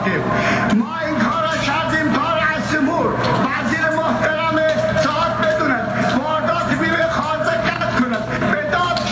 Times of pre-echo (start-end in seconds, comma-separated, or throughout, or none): none